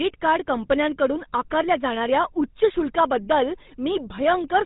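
Throughout the speech, the GSM full-rate codec damage is plainly audible: a buzzy, gravelly roughness from the vocal-tract model being driven by sparse, regularly spaced pulses, consistent with a 13 kbps full-rate link, and nothing passes above 3.8 kHz, leaving the sound dull and narrow.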